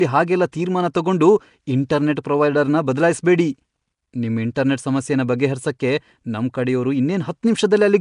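Throughout, the speech has a rough, hissy halo and an underwater smear, with nothing above 10.6 kHz. This is likely Nellymoser compression at a rate that fits about 44 kbps. At 0.52 s, just before "ತೀರ್ಮಾನ ತಗೊಂಡು", a pre-echo appears as a 10 ms hiss leading a sharp attack, because the block's quantisation noise fills the silence ahead of it.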